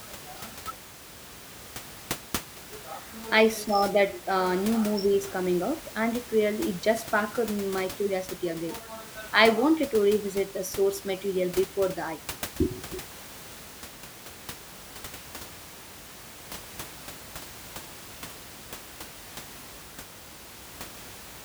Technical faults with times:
none

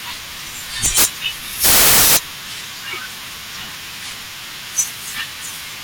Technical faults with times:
0.85-1.05 integer overflow
1.64-2.17 integer overflow
4.79 integer overflow

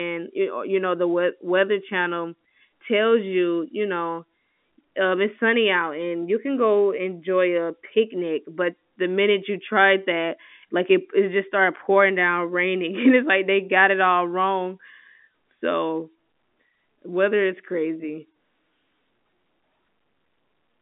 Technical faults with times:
none

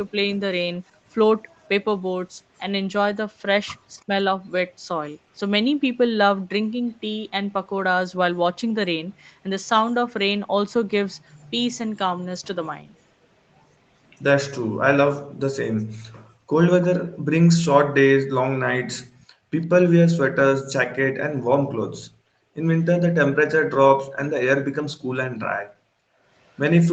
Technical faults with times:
4.00-4.05 echo leak
4.04-4.11 speech suppressed in double talk
15.28-22.54 background gated by the echo canceller
16.82-19.25 echo leak
26.11-26.22 background gated by the echo canceller
26.47-26.58 echo leak

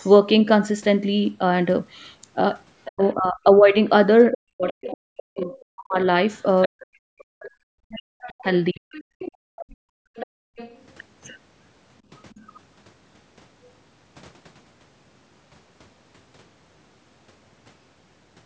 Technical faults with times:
2.84-3.10 other side's voice leaking through
2.87-8.84 speech suppressed in double talk
4.32-6.86 other side's voice leaking through
7.91-7.98 other side's voice leaking through
8.91-10.85 other side's voice leaking through
9.12-10.56 background gated by the echo canceller
12.30-12.45 other side's voice leaking through

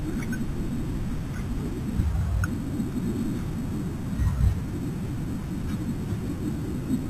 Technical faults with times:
0.00-7.09 imaging from sample-and-hold upsampling

